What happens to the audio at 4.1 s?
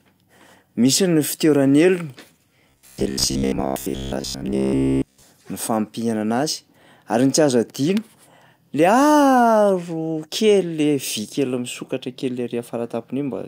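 At 4.1 s the speech has become a rigid, metallic buzz, robotic sound from repeated short buffers, running from 2.70 s to 5.23 s. The words remain roughly traceable, but a fixed pitch of about 66.8 Hz sits over them. The likely cause is audio arriving too seldom, so the software loops the last stretch of roughly 15 ms, the length that gives that buzz pitch, while most of the real sound in this span is skipped.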